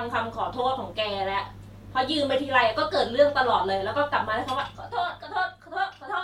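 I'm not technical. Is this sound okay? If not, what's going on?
No. From 4.5 to 5.66 seconds there is zipper noise. The voice gets much quieter there, but not in one smooth slide. The volume drops in small jumps, about seven every second. Each jump leaves a tiny click. Together the clicks sound like a ticking or zipping over the speech while it fades. It happens because the volume was lowered in coarse steps with no smoothing between them.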